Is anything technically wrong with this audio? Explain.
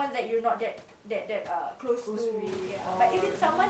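No, nothing here is technically wrong: it's ordinary call-quality speech with the highs topping out around 8 kHz, and the room's background noise that rises by about 16 dB around the 2.5-second mark is just part of the recording.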